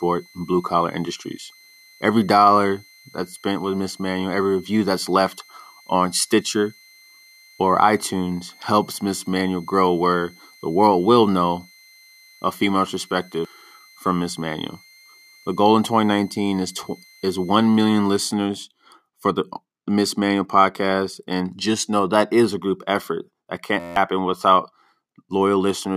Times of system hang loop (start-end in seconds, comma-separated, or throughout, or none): 23.80-23.96